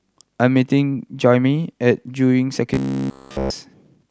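From 2.74 to 3.50 s the speech goes robotic, a hard, metallic buzz pinned at about 67 Hz. That's likely robotic sound from repeated short buffers: a roughly 15 ms chunk looping over and over while the real audio gets skipped.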